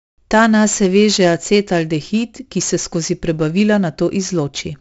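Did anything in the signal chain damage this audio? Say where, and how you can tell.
Yes, at the codec: 4-bit ADPCM compression throughout the speech leaves level-tracking gritty hiss, smeared attacks, and a spectrogram cutoff near 7.7 kHz, fitting a 64 kbps stream.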